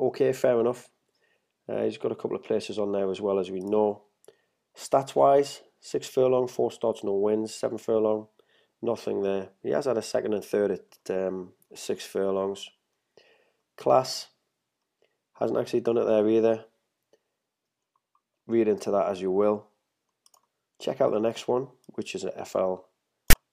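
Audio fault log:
23.30–23.33 s, file tags played as audio: a block of text tags was read as sample data, producing a brief, loud, off-centre rasp with abrupt edges.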